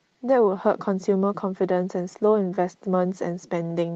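Clock drift between sender and receiver runs through the whole clip. The sending side's clock is slow by roughly four percent, so audio arrives a little more slowly than the receiver plays it out. The jitter buffer keeps draining, and the receiver has to stretch what it has to avoid running empty. The result is a faint unsteadiness in pacing, heard through the Opus call path with its band topping out around 8 kHz.

Repeated timing corrections run from 0.45 s to 3.87 s, where the receiver keeps repeating short slices of audio to cover the shortfall. All the edits go the same way, lengthening the sound, but they land at uneven spacing. Together they pad the stretch by something like a tenth and a half of a second, so playback runs at about 97% speed. Each repeat is tiny, heard only as slight hiccups and a tempo that drags unevenly.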